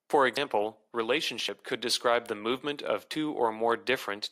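At 0.37 s, 1.49 s (just before "could describe the movement") and 3.11 s (just after "describe the movement of"), the speech jumps forward, likely a dropped buffer (overrun) where samples were overwritten before being read. Roughly 150 ms vanishes at the first point and about 50 ms at the others. Unlike a dropout, no silent gap appears. The surrounding sound is spliced straight together, so the jump itself gives it away.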